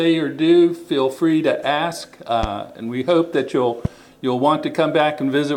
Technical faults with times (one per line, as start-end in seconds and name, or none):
2.43-2.46 loud pop
3.85-3.88 loud pop